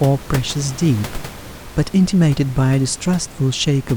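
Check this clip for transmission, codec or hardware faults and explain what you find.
Nothing here points to a transmission, codec or hardware problem; the only thing under the speech is the room's own background noise, sitting about 17 dB below it as part of the recording.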